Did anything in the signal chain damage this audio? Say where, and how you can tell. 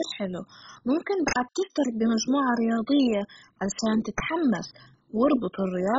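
Yes. At the codec stage, the speech was likely encoded with MP2 compression at a very low bitrate, consistent with something around 16 kbps. Throughout, nothing is present above 7.5 kHz, so the sound is dull. The damage is heavy: a gurgling, granular texture runs under everything. Layer II divides the spectrum into 32 sub-bands and shares out bits, and with so few bits the upper bands are shut off entirely. The remaining bands are quantised coarsely, which produces that grain.

At the driver or buffer stage, there are two uninitialised buffer events, at 1.28–1.36 s (80 ms) and at 4.18–4.20 s (20 ms). Each is an abrupt, loud crack or burst of digital noise that is unrelated to the surrounding speech. The lengths fit whole blocks of 80 ms and 20 ms. A buffer went to playback before any audio had been written into it, so whatever stale memory it held was output as samples.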